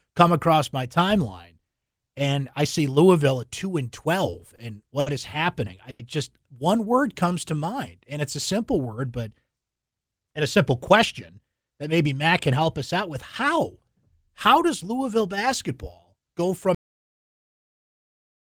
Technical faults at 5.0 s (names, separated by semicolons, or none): short stall from a late packet